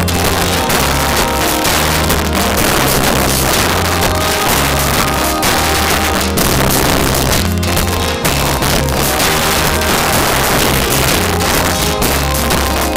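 All the way through there's integer overflow: the signal runs about 5 dB too hot, and the loudest few percent of samples wrap to the opposite sign, giving harsh cracks.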